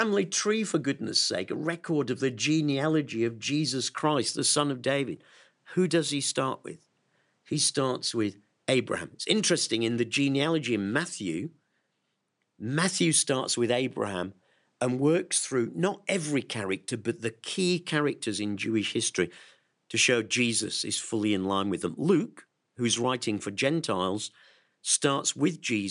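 Listening to this speech recording, nothing stood out as a technical problem at any point.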